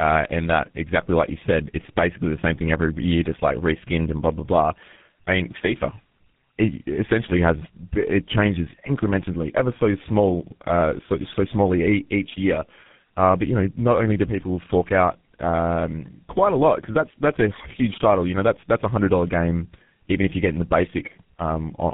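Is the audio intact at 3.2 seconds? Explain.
No. At 3.2 seconds, as across the whole clip, there is tandem speech coding: speech already coded by G.723.1 at 6.3 kbit/s passed through G.711 A-law and was recoded as GSM full rate, compounding the errors. It sounds rough, muffled and warbly, with nothing above 3.8 kHz.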